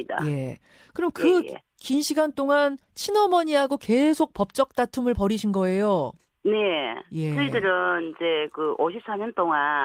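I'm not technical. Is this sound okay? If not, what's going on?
Yes, this speech sounds fine to me, with nothing going wrong that you need to worry about, just the normal light compression used for sending voice over the internet.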